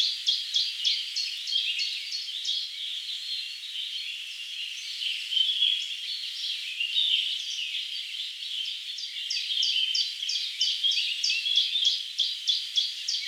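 Listening to this recording of everyday sounds, nothing technically wrong stood out.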